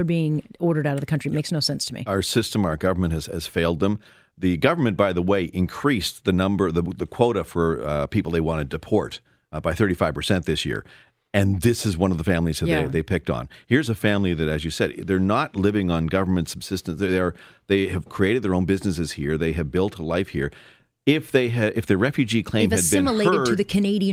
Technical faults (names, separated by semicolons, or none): none